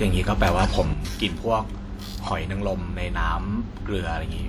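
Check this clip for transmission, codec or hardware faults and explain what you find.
One channel drops out from 0.93 s to the end: the speech level falls abruptly by about 6 dB and stays there, likely because one stereo channel was lost. Summed to mono, losing one of two matching channels halves the signal, so the speech turns quieter while sounding the same.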